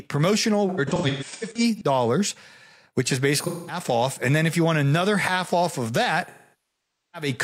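AAC frame loss with concealment occurs three times. From 0.69 to 1.82 s, dropouts are scattered across about 1.1 s, with 597 ms lost in runs of up to about 150 ms. After "which is", 213 ms goes missing between 3.40 and 3.79 s. After "another half off of", 853 ms is lost from 6.26 to 7.28 s. The decoder rebuilds each missing stretch from the last intact spectrum, so short losses sound smeared, noisy or phasey, while longer ones decay to a very faint noise floor and fade back in.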